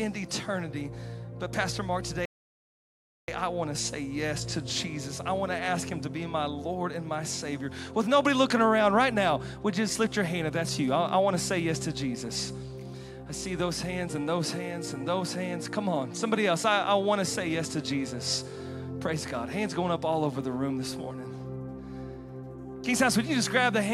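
A rebuffering stall interrupts the audio from 2.25 to 3.28 s: the sound drops to silence for about 1.03 s, then resumes exactly where it stopped, because playback waited for more data. Unlike a dropout, nothing is skipped; the pause simply adds time.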